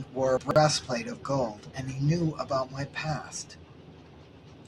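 Speech, with a short jumbled patch between 0.37 and 0.56 s where the chunks play out of order: a roughly 46 ms block turns up three chunks late, after the audio meant to follow it, so that moment sounds garbled and there are three hard joins.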